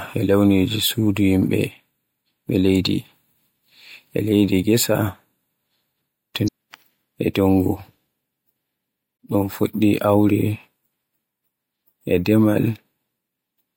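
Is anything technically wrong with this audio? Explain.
Yes. There is damaged data in a compressed stream, at 6.44–6.49 s and 9.16–9.19 s. Corrupted bytes make the decoder misread those frames and lose sync while it hunts for the next frame header, producing a short chirp, squawk, click or hole in the speech each time.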